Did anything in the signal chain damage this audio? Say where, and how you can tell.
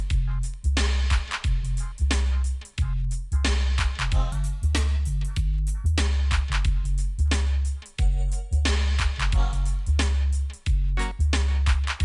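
Yes. From 4.32 to 6.00 s the sound jumps up in pitch by about 1.5 semitones and runs about 1.09 times faster, then drops back to normal. Pitch and tempo shift together by the same ratio, which points to a wrong sample rate at the playback or driver stage. The samples are being clocked out faster than they were captured, with no conversion, which fits 22 kHz material being played at 24 kHz.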